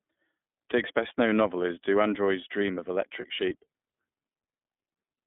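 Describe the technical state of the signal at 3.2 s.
At 3.2 s there is a lost iLBC frame, from 3.20 to 3.25 s: about 30 ms of missing audio, which points to a single dropped packet. The decoder fills it by repeating the last pitch cycle blended with noise, so the gap sounds like a brief held, faintly buzzy vowel rather than silence or a click. Because each iLBC frame is decoded independently, the sound is correct again immediately afterwards, with none of the lingering smear that predictive codecs leave.

Underneath that, the iLBC codec itself is audible. The band runs roughly 200 Hz to 3.5 kHz, which gives a thin, telephone-like sound with a slightly rough, synthetic edge. The 30 ms framing fits the codec's 13.33 kbps mode. This damage is steady and band-limited, unlike the momentary concealment.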